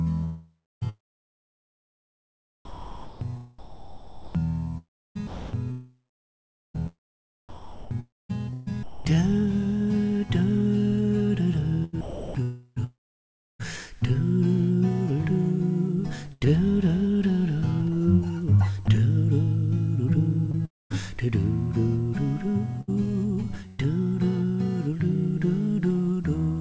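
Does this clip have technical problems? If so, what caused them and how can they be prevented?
Yes, several, all from the call path.

At 0.24 to 0.83 s there's a long network dropout, likely. About 0.58 s of sound never arrives, and the receiver drags out the last sound, which decays into roughly 0.31 s of silence. A more stable connection or a larger jitter buffer would help.

The sound gets chopped by the voice detector, which keeps toggling and patching holes with comfort noise. About 3.0 s is replaced between 2.65 and 6.79 s, 1.07 s between 7.49 and 9.15 s, 1.51 s between 11.84 and 13.61 s, and 0.45 s between 20.52 and 23.80 s. That points to the detector likely misjudging this material as background. Turning off discontinuous transmission, or loosening the detector's threshold, would stop it.

At 16.33 to 16.46 s there's a burst of packet loss. About 80 ms goes missing, and the receiver fills it by holding the last sound and fading it over about 75 ms. 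Forward error correction or a bit more jitter-buffer headroom would cover this.

At 18.86 s the sound is dropped by the voice detector, likely. A 20 ms patch of comfort noise replaces it and swallows about 10 ms of sound. The same detector settings would fix this.

Nothing above 8 kHz comes through, which fits G.722 at 64 kbps.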